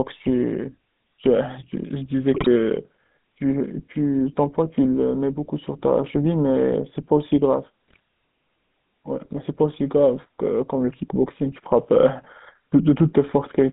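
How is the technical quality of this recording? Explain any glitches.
The recording is plainly degraded. It carries plainly audible phone-codec coloration throughout and has two short bursts of corruption.

The GSM full-rate codec shapes the whole clip. The speech is narrow, from about 150 Hz to 3.7 kHz, with a buzzy, gravelly roughness. A vocal-tract model driven by sparse, regular pulses causes this, which fits a 13 kbit/s GSM stream.

GSM bit errors strike at 2.34–2.47 s and 7.88–7.99 s. Flipped bits corrupt the decoder's filter, pitch and gain values. The speech briefly squawks and gargles. The length fits about six damaged 20 ms frames each time.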